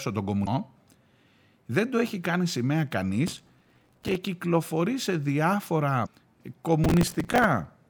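Damaged data in a compressed stream hits this speech clip at 0.43–0.48 s and again at 6.02–6.07 s: corrupted bytes make the decoder misread frames and lose sync while it hunts for the next header, producing a brief blip. Processor overload crackle follows at 3.28–4.16 s and 6.84–7.44 s, a gritty tearing as the processor misses dozens of successive deadlines on buffers of roughly 5 ms, each gap filled with a hard-edged fragment of old audio.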